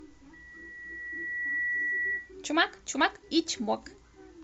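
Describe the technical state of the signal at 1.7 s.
At 1.7 s the microphone is picking up its own loudspeaker, and the loop gain around 1.9 kHz has passed unity, producing loudspeaker feedback squeal from 0.33 to 2.34 s. The tone swells over about one and a half seconds until it sits roughly level with the speech.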